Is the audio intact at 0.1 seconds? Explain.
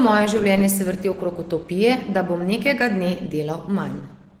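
No. Opus compression is audible at 0.1 s and throughout the clip. The speech sounds muffled, hoarse and grainy while still keeping its full high-frequency range. That pattern likely comes from a low-bitrate Opus encoder that has fallen back to its hybrid mode, coding the lower band with its speech coder and filling the upper bands coarsely. Such plainly audible damage fits a rate of roughly 16 kbps.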